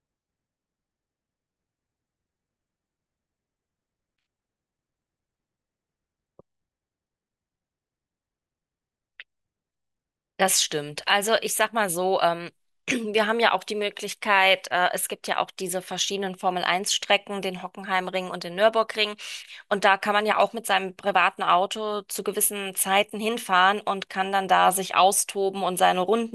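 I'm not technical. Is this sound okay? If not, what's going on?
Yes, it's fine: nothing in this recording sounds broken, cut off or glitchy, so there's nothing to worry about here.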